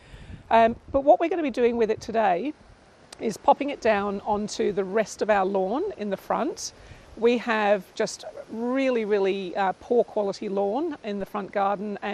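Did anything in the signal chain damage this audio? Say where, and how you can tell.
Yes, two things. Across the whole clip the top end sounds dull and there's a gurgly, granular grit riding on everything, with the upper bands flickering in and out. That's coding damage, and it's plainly audible. The likely culprit is MP2 compression at a low rate, something like 80 kbps. Layer II runs out of bits, shuts off whole high sub-bands, and crushes what's left into coarse steps.

Then at 11.21 s there's a DC step: a single low thump while the sound carries on unchanged underneath. The waveform's zero line jumps in one go, the sort of thing you get when a converter recalibrates or an offset input gets switched in. Here the offset doesn't stay put. It drains away as though through a high-pass around 5 Hz, so you hear the thump and then the baseline settles back.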